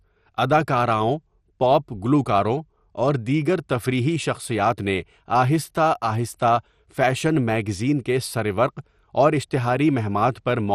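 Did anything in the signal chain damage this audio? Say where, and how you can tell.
Yes, at the codec stage: the speech sounds dull and gurgly all the way through, with nothing above 13.9 kHz and upper bands flickering in and out. That's likely MP2 compression at a starved bitrate, which fits about 64 kbps, switching off sub-bands and coarsely quantising the rest.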